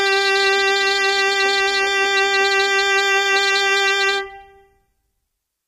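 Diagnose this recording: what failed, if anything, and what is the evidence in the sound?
Codec stage, likely low-delay AAC compression near 32 kbps: coarse quantization at this low bitrate puts noise between the harmonics, leaving the music grainy throughout, with a dulled top band.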